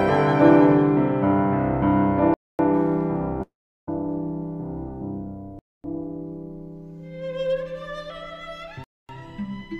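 At 2.34 s the sound breaks off for 250 ms, a gap between chunks, where silence was left at the join between 3-second chunks. The hole recurs at 5.59 s and 8.84 s. On a waveform these are flat, hard-edged blanks. A spectrogram shows clean vertical slices of nothing.

From 3.42 to 3.88 s, a long network dropout, likely lost packets, removes about 0.45 s of audio. A brief fading buzz or hiss continues the last sound, then about 0.37 s of silence follows. A spectrogram shows a smeared tail dissolving into an empty band.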